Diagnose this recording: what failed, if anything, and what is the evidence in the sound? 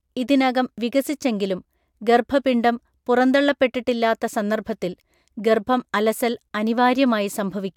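Nothing in this speech recording points to a failure at any stage of the chain. No dropout, discontinuity or other defect can be heard anywhere in the clip.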